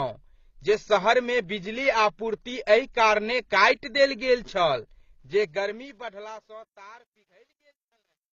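Throughout the speech, the audio was likely encoded by one lossy codec and then re-encoded by another, with the sound pointing to low-bitrate AAC-LC followed by HE-AAC, both around 24 kbit/s. This is transcoding between lossy codecs. The second encoder spends its small budget reproducing the first one's artefacts while adding its own, so both sets of artefacts are heard together. Nothing survives above 7.6 kHz, leaving the speech dull and band-limited.

From 5.20 s to the end at 8.32 s, the fade-out runs smoothly in shape from around the 5 s mark, but the gain stage applying it kept too few bits and added no dither. That is consistent with roughly 11-bit resolution. This is truncation distortion on a fade. As the level sinks toward the smallest step, the waveform collapses into coarse square steps. The tail turns gritty and granular, and it is worst from 6.48 s to 8.33 s.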